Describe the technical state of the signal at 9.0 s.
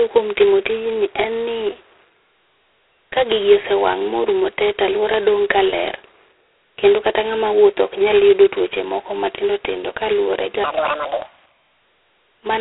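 At 9.0 s, as throughout, there is heavy G.726 ADPCM damage: coarse difference coding, consistent with 16 kbit/s, adds a rasping, level-following hiss, and nothing passes above 3.9 kHz.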